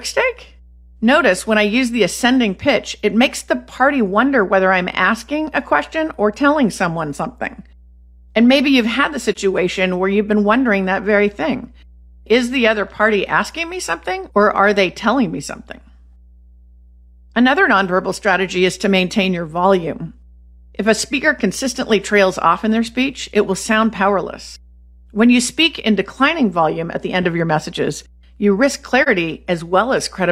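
A ground loop or nearby transformer is coupling the power line into this speech recording, so a mains hum at 60 Hz runs under the whole clip. It sits roughly 30 dB below the speech, a steady low tone that never changes with what is being said. Separately, the AAC stream lost data twice and the decoder zeroed the missing spectrum. This is AAC frame loss with muting. After "maybe you've had the", the sound fades out and back in from 9.32 to 9.37 s. After "your messages you risk", the same happens from 29.02 to 29.08 s. Each gap lasts about 43 ms, which fits a single lost frame. The overlapping decoder windows smooth the edges, so each dropout is a brief soft dip in the speech.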